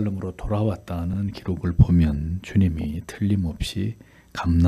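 Two short stutters give away repeated frames in this audio. At 1.13 to 1.18 s a 48 ms chunk plays twice, which fits a pair of compressed frames being sent again. At 2.81 to 2.86 s a shorter 24 ms block, about one frame's worth, comes round three times. Each event stretches the audio by 48 ms.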